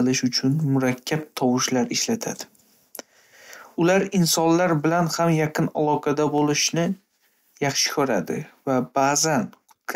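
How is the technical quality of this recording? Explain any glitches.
There's one glitch: a single sharp click at 6.38 s, right after "bilan ham yaqin aloqada". That's dropped samples, likely a handful (just a fraction of a millisecond) going missing, so the waveform jumps straight to a later value. Far too short to lose any sound, it comes across as one crisp tick.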